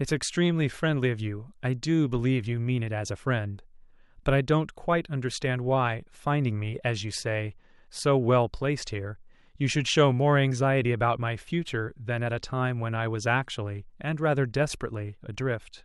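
Speech recording, with no audible technical faults anywhere.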